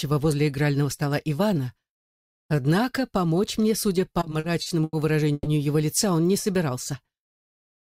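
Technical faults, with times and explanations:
4.13–4.95 s, repeated stalls (stutter): Packets kept arriving late, so the jitter buffer emptied seven times in under a second. Each time, the receiver stretched the last bit of sound to cover the wait, adding about 210 ms in total. The longest hold was 90 ms, and roughly a quarter of the span is filled-in sound. Nothing is lost, but the audio drags and catches in a halting, stuttering rhythm.
5.33–5.48 s, call audio freeze: The likely cause is a batch of packets delayed in transit, which drained the jitter buffer and pushed playback about 130 ms later. While it waited, the receiver carried the last sound forward for about 130 ms, and the final 20 ms of that gap falls silent. When the packets arrive, the audio resumes exactly where it stopped, with no content missing, just a held, frozen pause.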